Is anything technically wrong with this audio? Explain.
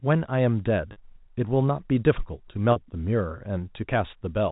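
Yes. At 0.92 s and again at 2.72 s the speech briefly holds a slightly buzzy, frozen tone for about 40 ms, which fits two consecutive 20 ms packets going missing each time. This is packet loss with pitch repetition: the receiver loops the last pitch period to cover the gap. The telephone-band G.711 coding itself sounds as expected.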